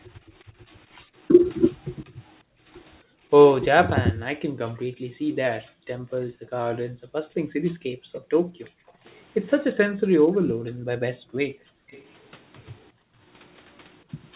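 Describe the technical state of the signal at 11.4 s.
At 11.4 s the background is gated by the echo canceller, within a span from 9.92 to 11.88 s. While the far-end loudspeaker played, the canceller pulled the microphone down hard, by about 40 dB at its deepest, so the room sound drops away and returns once it releases.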